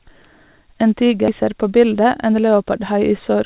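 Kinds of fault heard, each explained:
Skip ahead: At about 1.28 s the speech jumps forward with no gap. Roughly 0.7 s of audio is gone, and nothing fills the hole. This happens when later audio is already queued and a stretch is thrown away, either in transit or by an overfull jitter buffer. The two sides of the cut are spliced almost directly, so the talk lurches on mid-flow. The delay drops by about the same amount.
Jitter buffer speed-up: From about 1.87 s to 2.33 s the speech runs at about 110% speed. The pitch stays the same. The receiver was holding more audio than it wanted, so it trimmed tiny slices, each one or a few pitch periods long, many times in a row. Around 50 ms is removed in total. The result sounds briefly hurried, heard over the call codec's usual band ending at 4 kHz.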